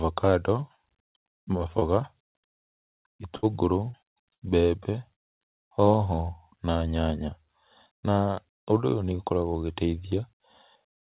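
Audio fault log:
1.79–1.84 s and 5.13–5.19 s, short concealed packet loss: a brief smear where about 30 ms went missing and the receiver bridged the hole by extending the preceding sound.
3.37–3.46 s, burst of packet loss: the last sound held and fading out, then a jump ahead, as about 60 ms of consecutive packets were lost and the receiver stretched the last sound.
3.91–4.53 s, repeated packet loss (robotic sound): choppy sound with pieces missing, as six gaps (the longest 58 ms) were each patched with extended audio, covering about 28% of that span.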